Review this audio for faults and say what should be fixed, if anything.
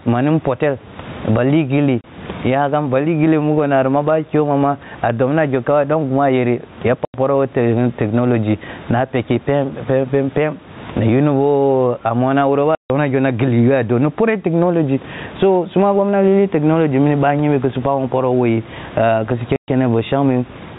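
The level pumps all the way through this speech. The background room noise sits about 33 dB under the voice, and the gain swings by roughly 20 dB. Loud and quiet syllables come out squashed to a similar level. That's gain pumping, most likely from input gain cranked far too high with a fast limiter or compressor clamping down on each peak. Back the mic gain off and ease the limiter so it only catches the odd peak.

There are also four hard dropouts where the audio just goes dead. That's packet loss filled with silence: the receiver played nothing for the missing packets. They're at 2.01 s (30 ms, between "mpitel ba lih ghilli" and "nyakam ba"), 7.05 s (90 ms), 12.75 s (150 ms, between "a mona wuroba" and "gho na"), and 19.56 s (120 ms). Every gap is a multiple of 30 ms, which fits 30 ms packets. Add a jitter buffer with packet loss concealment, or fix the network path, so lost packets get smoothed over instead of dropped to silence.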